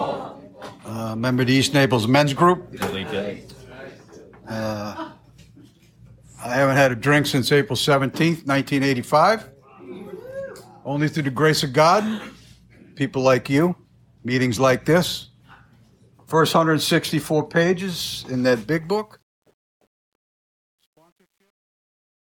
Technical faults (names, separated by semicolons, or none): truncation distortion on a fade